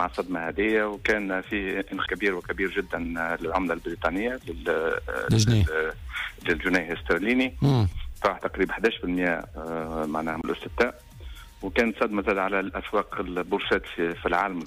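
At 2.06 s and again at 10.41 to 10.44 s you get a CD skip. A knock or a flaw made the laser jump onto another turn of the spiral, so there's a tick, a very short mute of only a couple of hundredths of a second, and then the audio carries on from a different spot.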